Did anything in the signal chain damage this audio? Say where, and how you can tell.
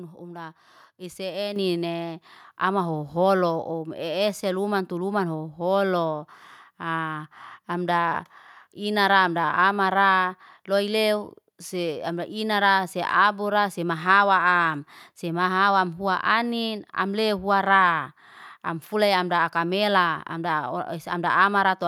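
Yes. At 1.56 s the microphone volume stepped up: speech and background noise jump by about 7 dB together, in a single step. That's the call processing stage. Its automatic gain control judged the mic too quiet and raised the device's input level mid-stream.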